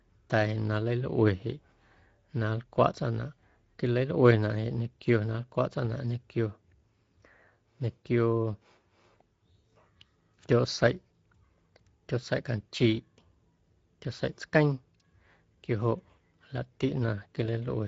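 Speech coded throughout with the Speex codec: a plainly hoarse, grainy CELP rasp rather than MP3-style swirling, and nothing above 7.7 kHz, which fits wideband Speex at around 16.8 kbps.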